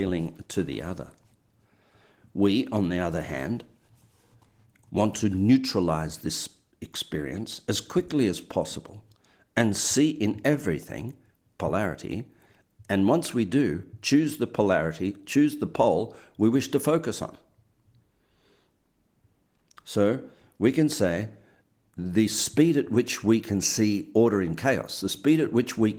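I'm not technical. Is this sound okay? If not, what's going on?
Yes, this sound is okay.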